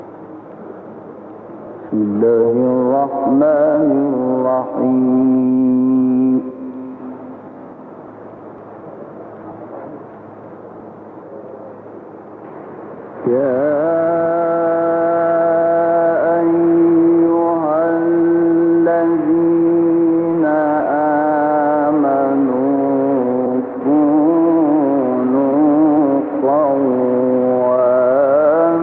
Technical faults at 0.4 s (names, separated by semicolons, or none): none